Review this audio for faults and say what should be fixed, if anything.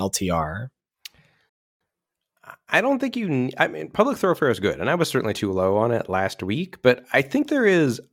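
Rebuffering stall from 1.49 to 1.81 s: the player exhausted its downloaded audio and paused until more arrived, so the speech drops to silence for about 0.31 s and then picks up exactly where it stopped, adding time without losing content. Preventing it means keeping a larger playback buffer or adapting to a lower bitrate when delivery slows.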